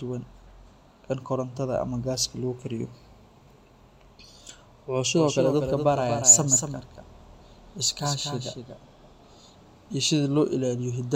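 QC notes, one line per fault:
5.17–8.77 s, doubled audio track: a full-band second copy of the speech trails by about 200 ms, around 5 dB quieter, likely from a slower duplicate capture path. Unlike an echo or reverb it has no decay or room colour, and it starts and stops abruptly.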